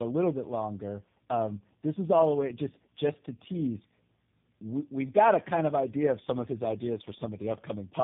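Throughout, the speech sounds rough, muffled and warbly, with nothing above 3.7 kHz. This is tandem speech coding: the sound points to three speech codecs in a row, ending with one like G.729A, each re-encoding the previous coder's damage.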